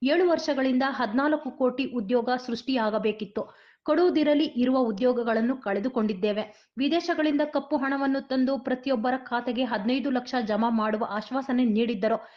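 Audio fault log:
No audible faults detected.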